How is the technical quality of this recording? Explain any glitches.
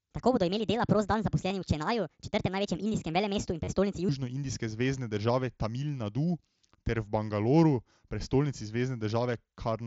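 The recording has two audible problems: the opening runs fast, and there are two short concealed dropouts from the Bluetooth headset link. The speech comes through the mSBC headset codec, with the usual 8 kHz bandwidth ceiling and light graininess on loud syllables.

From 0.0 to 4.09 s, a section at the wrong speed plays at about 1.45 times normal rate. Pitch and tempo rise together by roughly seven semitones, so the speech sounds high and hurried until normal speed returns at 4.09 s. The likely cause is a playback or edit stage running this section against the wrong clock, which compresses the time base and shifts pitch by the same ratio.

Concealed Bluetooth headset packet loss occurs at 1.49 s, where about 15 ms is missing (consistent with two lost frames), and from 3.64 to 3.67 s, where about 30 ms is missing (consistent with four). In each gap the receiver fills the hole by repeating a best-matching stretch of the preceding waveform. 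The longer one sounds like a brief buzzy, held tone, followed by a slight warble as the real signal resumes.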